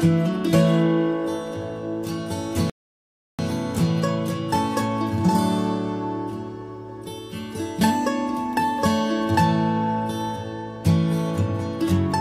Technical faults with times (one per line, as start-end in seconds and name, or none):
2.70-3.39 rebuffering stall